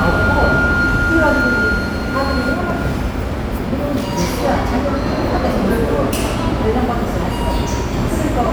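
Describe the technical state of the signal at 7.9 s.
At 7.9 s the signal is intact, with no dropout, clipping, glitch or other technical fault to be heard at that point.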